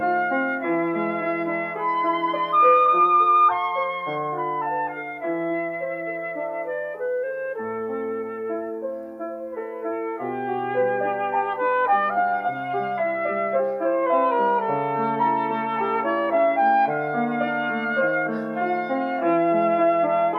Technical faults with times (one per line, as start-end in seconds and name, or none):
none